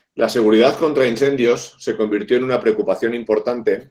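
Opus voice compression runs throughout the speech. The encoder splits the band, with SILK's linear prediction below 8 kHz and a thin CELT layer above, and starves the excitation at a rate pointing to about 16 kbps. The result is plainly audible hoarse, slightly robotic speech.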